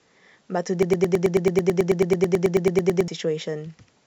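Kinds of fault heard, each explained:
Broken-record loop: from 0.83 s to 3.08 s, a single fragment about 109 ms long replays back to back, roughly 21 times in a row, so the speech freezes into a rapid stutter for over two seconds. The likely cause is a player, encoder or stream that stalled and kept resending the last chunk it held. Whatever speech belonged in that span is missing.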